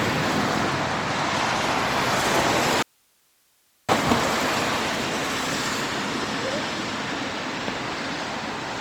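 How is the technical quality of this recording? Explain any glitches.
The recording has one clear glitch: an audio dropout to a faint residue from 2.83 s to 3.89 s. For about 1.06 s the sound cuts out abruptly, mid-flow, and only a low bed of hiss sits in the gap, somewhere around 40 dB below the normal level. The likely cause is the wanted signal being lost upstream while the path after the break stayed live, which is why you hear hiss and not true silence. It then snaps back just as suddenly, so it doesn't read as a pause or a fade.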